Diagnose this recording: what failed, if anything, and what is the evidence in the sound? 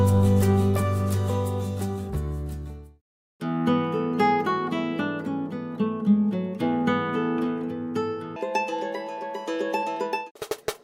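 Audio read two samples at a time (double speed), from 8.36 s to 10.84 s, a sample-format conversion fault. The sound runs twice as fast and a full octave higher, 12 semitones. Pairs of samples are being consumed as single frames.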